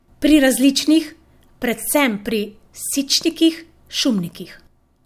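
The speech in this clip carries no audible technical faults. There is nothing here to place in time or trace back to a cause.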